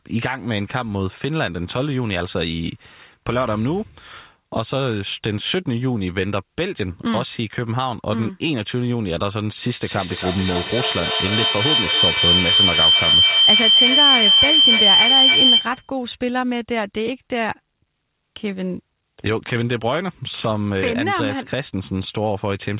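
From 9.81 s to 15.97 s a feedback howl builds. Unlike echo, which fades, each loop between microphone and loudspeaker gains level. The repeats narrow to a tone near 3 kHz, pulsing about every third of a second and peaking about 8 dB above the speech.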